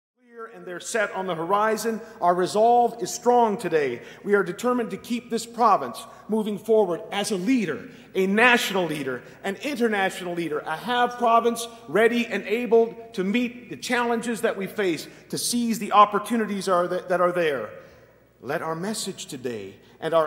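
No faults; the level fades in smoothly until 1.54 s.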